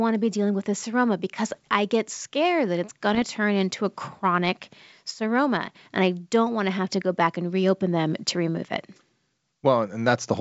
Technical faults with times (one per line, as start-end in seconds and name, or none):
1.51-1.73 bit errors on an ADPCM link
3.15-3.22 bit errors on an ADPCM link